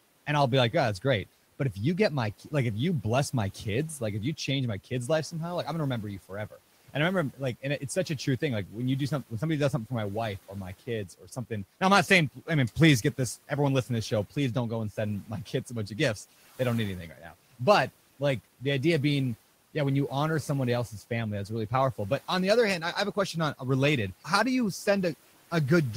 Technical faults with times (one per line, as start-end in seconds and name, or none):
11.21-11.51 speech cut by the noise suppressor